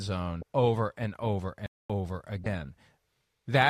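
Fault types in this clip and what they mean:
Damaged data in a compressed stream: Corrupted bytes in the encoded stream make the decoder misread frames, lose sync and skip ahead to the next valid frame header. Here it is heard as two short blips, each about 32 ms long. The first runs from 0.39 to 0.43 s, just before "over and over". The second, from 2.43 to 2.46 s, is a similar brief blip.
Playback stall: The speech stops dead in mid-flow for about 233 ms, from 1.66 to 1.90 s, right after "over and over", then resumes. The gap is silence rather than a glitch or noise burst. The likely cause is the player's output running dry, either from the decoder or network falling behind or from the playback thread being blocked, so no samples reached the device until the buffer refilled.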